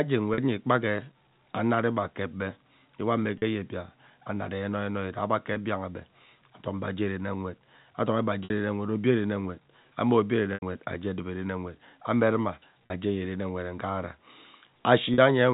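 Packet loss with pitch repetition occurs at 0.34, 3.38, 5.54, 8.44, 10.54, 12.87 and 15.14 s. Each time, audio went missing, and the receiver bridged the gap by looping the last pitch period it had. The losses last 20 to 80 ms and come in 20 ms steps, which fits 20 ms packets. The 20 and 40 ms gaps sound like a brief, buzzy hold on the sound. The 60 ms gap at 8.44 s and the 80 ms gap at 10.54 s run past the roughly 50 ms fade, so they thin toward silence before the sound returns. All of this sits within the narrow telephone band of G.711.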